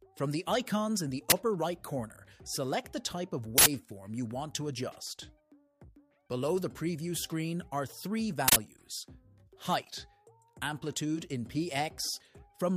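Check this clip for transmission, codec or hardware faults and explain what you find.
Three bursts of uninitialised buffer noise appear. They come at 1.30 to 1.32 s, 3.58 to 3.66 s and 8.48 to 8.56 s. Each time, a block went to playback before any audio had been written into it. The leftover memory was then played as if it were samples. The first burst lasts 20 ms and the other two 80 ms each. The first is heard as a loud crack, and the other two as bursts of digital noise.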